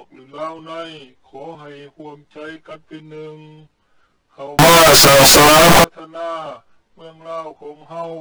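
From 4.59 to 5.84 s, loud harsh distortion with no quiet parts; likely signed and unsigned mixed up, flipping each 16-bit sample's top bit.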